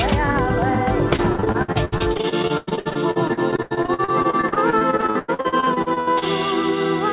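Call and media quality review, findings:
Repeated packet loss (robotic sound), 1.16–6.24 s: dozens of gaps up to 98 ms, about a third concealed by repeated sound. Spectrogram shows stuttering smeared blocks below 4 kHz, which fits narrowband jitter-buffer concealment.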